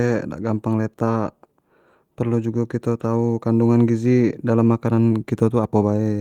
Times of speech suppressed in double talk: none

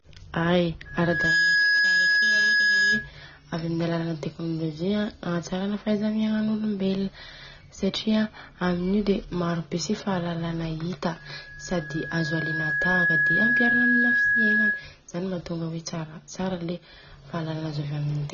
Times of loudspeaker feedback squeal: 0.85-3.11, 11.17-14.92

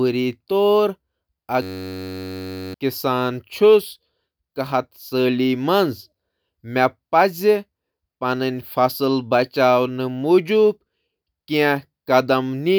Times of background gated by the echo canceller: none

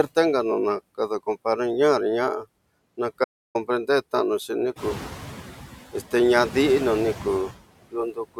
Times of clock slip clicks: none

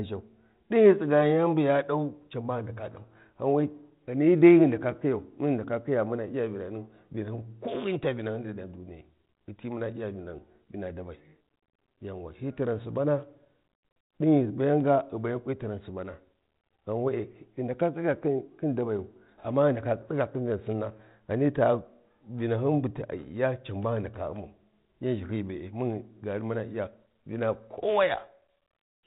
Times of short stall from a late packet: none

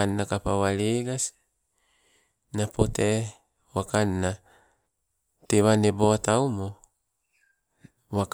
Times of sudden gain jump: none

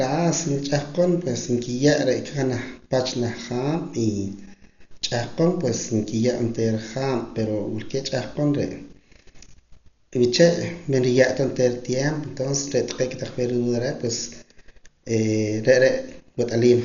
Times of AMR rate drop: none

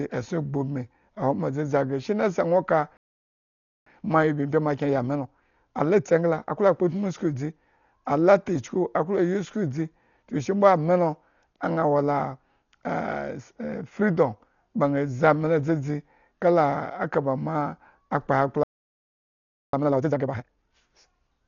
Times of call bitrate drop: none

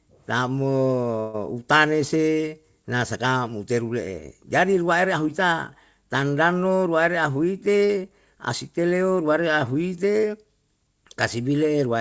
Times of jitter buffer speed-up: 7.05-8.79

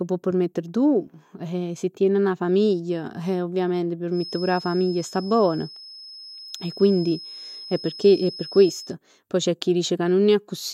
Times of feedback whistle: 4.09-8.96

